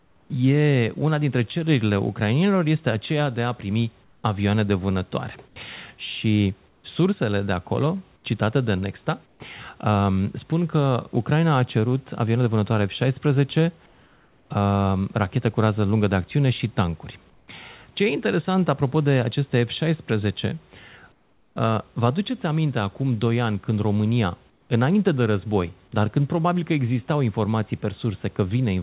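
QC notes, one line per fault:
0.0–0.3 s, 4.04–6.84 s, 8.16–9.4 s, 13.86–14.5 s, 17.3–17.48 s, 21.12–21.56 s, 24.5–24.7 s: comfort noise in place of the background. In these pauses the room noise turns flat and featureless, about 3 to 8 dB quieter. This happens after "de acolo", after "de acțiune și tancuri" and before "înainte de război dar". The likely cause is discontinuous transmission. The sender stops sending during the pauses, and the receiver fills them with synthetic noise.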